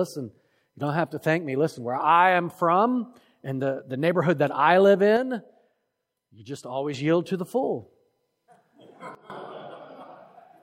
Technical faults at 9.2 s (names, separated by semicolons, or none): sudden gain jump